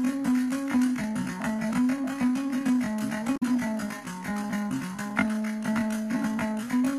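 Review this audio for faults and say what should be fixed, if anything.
Damaged data in a compressed stream at 3.33 to 3.43 s: corrupted bytes make the decoder misread frames and resync, producing a brief chirp or blip. Verify stream integrity with checksums and re-fetch or re-encode from a clean source.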